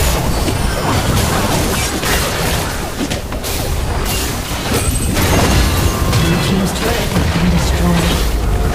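Throughout the clip the sound carries a harsh, buzzy distortion. Quiet passages fill with a steady noise floor instead of going silent. This is likely a stuck bit, one data bit held fixed. Its step is roughly -35 dBFS, so the added noise stays clearly audible.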